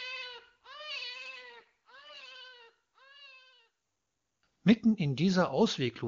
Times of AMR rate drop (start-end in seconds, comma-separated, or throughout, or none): 1.13-2.36